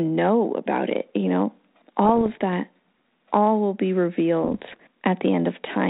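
A speech recording carried over a 32 kbit/s-sounding G.726 ADPCM link, hit twice by bit errors on the ADPCM link: after "about it you know" (2.05–2.42 s) and after "all will be" (4.43–4.82 s). Pops and rasping bursts with brief level jumps ring on as the decoder's step size and predictor recover. Packet loss would leave gaps instead.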